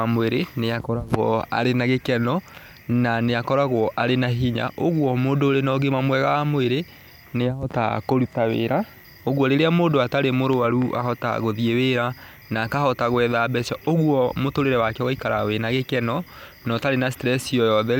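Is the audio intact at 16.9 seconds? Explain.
Yes, the speech at 16.9 seconds is intact, with no dropout, click, distortion or other fault at that moment.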